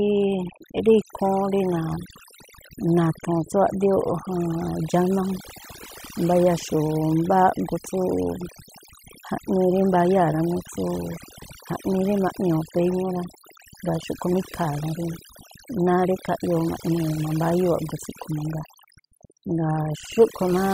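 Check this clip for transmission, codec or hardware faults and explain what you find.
One fault runs through the whole speech clip: overdone noise removal. A noise reducer set too aggressively cuts any frequency band near its noise estimate. Quiet parts of the voice vanish with it. Pauses drop to near silence with twinkling specks.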